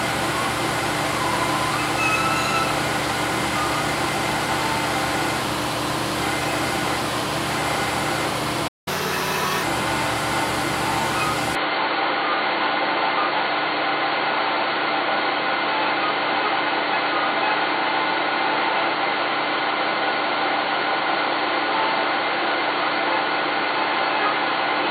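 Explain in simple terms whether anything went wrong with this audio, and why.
At 8.67 s the sound cuts out for about 0.19 s. This is a playback stall, most likely the player briefly running out of data. It is a gap in time, not a dropout of sound quality.

From 8.88 to 9.63 s the audio runs 1.25 times fast, noticeably higher in pitch, then settles. This catch-up at higher speed recovers the lost time, unlike a stall, which only pauses.

From 11.55 s to the end, the sound is dull and boxy, with a faint new hiss. Loudness stays the same and there's no gap. This is most likely an input switched to a poorer device, and unlike the stall, it lasts.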